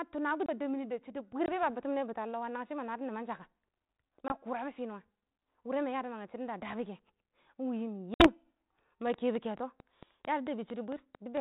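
Packet loss on an ADPCM call occurs at 1.46 s (20 ms), 4.28 s (20 ms) and 8.14 s (60 ms). Each dropout leaves a hard-edged silent hole, after which the decoder's adaptive predictor and step size have drifted from the sender's. The audio returns slightly distorted, as at "ba bets mini bits" and "kurabɔ finuwa", then recovers within tens of milliseconds. The 4 kHz-limited band these gaps sit in fits G.726 at 32 kbit/s.

A train of clicks runs from 9.14 s to 11.38 s: about ten similar pulses at a regular 4.48 per second, peaking around 15 dB above the signal. They tick over the sound and through its pauses, likely from electrical interference or a faulty connection.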